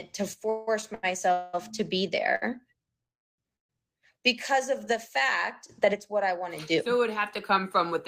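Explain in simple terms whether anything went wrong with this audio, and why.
The speech keeps getting held up by network delays, though nothing is actually lost.

From 0.49 to 1.32 s there's a run of repeated stalls (stutter): four little pauses, the longest about 0.18 s, where the last sound gets stretched while the packets catch up. That's why it drags just before "to be".

Right after, from 1.32 to 1.55 s, comes a call audio freeze: the sound hangs as a held buzz or hiss for about 0.2 s. Two more freezes follow, 3.02 to 3.40 s and 3.56 to 3.71 s (just before "because of the fact"), and those two fade to silence. In all three, packets were likely held up on the way.

At 2.35 to 2.44 s there's a short stall from a late packet: one sound gets held about 60 ms too long, with a slight buzz or dip, then carries on.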